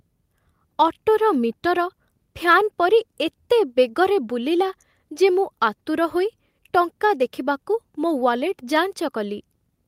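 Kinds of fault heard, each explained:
No technical fault can be heard; the speech signal stays continuous and steady throughout.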